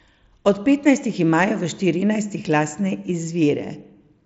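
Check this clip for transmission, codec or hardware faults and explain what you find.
No transmission, codec or hardware faults turn up in the clip.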